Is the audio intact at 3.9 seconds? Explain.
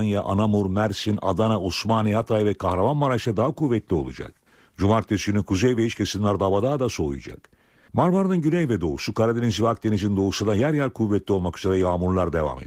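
Yes, the audio is intact at 3.9 seconds, with the speech passing through the Opus voice compression without a fault at that point.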